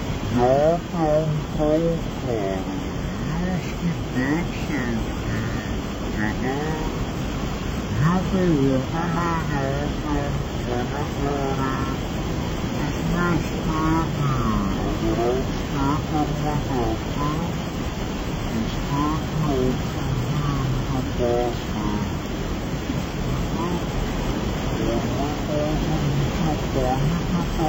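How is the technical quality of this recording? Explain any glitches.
The technical quality is poor: from start to finish the whole recording plays at half speed and sits a full octave (12 semitones) too low, so everything sounds slowed, heavy and sagging. This is a stereo read as mono fault. The left and right samples, which alternate in the file, are being read in sequence as one channel, so each moment is stretched over twice the time. A fainter mirrored copy of the sound also shows up in the upper half of the spectrum.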